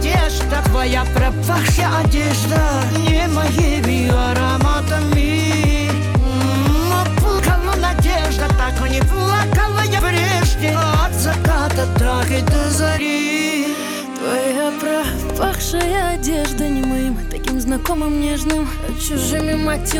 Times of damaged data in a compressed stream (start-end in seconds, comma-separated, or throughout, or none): 1.77, 7.38, 9.98